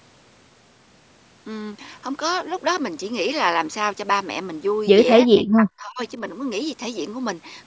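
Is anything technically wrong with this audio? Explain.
Yes, there is one fault. From 5.25 to 6.0 s, the speech is suppressed in double talk. The speech drops by as much as about 40 dB, over roughly 700 ms of that stretch, likely because an echo canceller mistook overlapping far-end sound for echo and attenuated both. On the waveform it looks like a sudden collapsed envelope. On the spectrogram it appears as a faded band, with the content capped at 8 kHz by the call's microphone processing.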